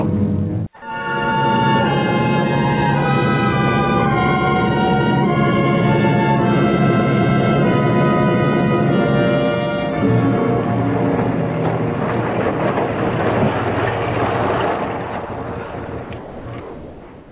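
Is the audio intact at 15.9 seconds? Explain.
No. From 15.86 to 15.88 s, 20 ms of sound gives way to a brief patch of steady noise or near silence, likely where the voice detector dropped sound and comfort noise filled the gap.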